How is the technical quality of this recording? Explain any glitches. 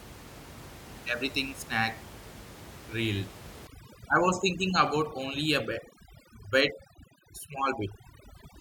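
The recording has room noise about 18 dB below the speech, which belongs to the original space, and one processing fault from 3.67 s onward.

Overdone noise removal, from 3.67 s to the end: noise reduction set too strong pushes frequency bands down or out whenever they sit near its noise estimate, stripping quiet speech detail as well. The background drops and breaks up into twinkling specks.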